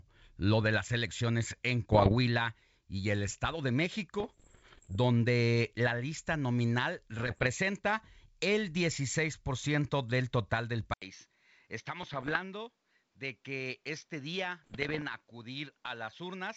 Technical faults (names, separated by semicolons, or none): bit errors on an ADPCM link; input switched to a poorer device